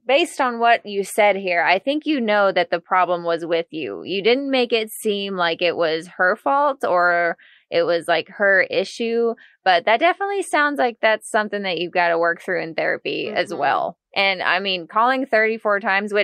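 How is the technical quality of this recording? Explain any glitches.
No technical faults are audible anywhere in this recording.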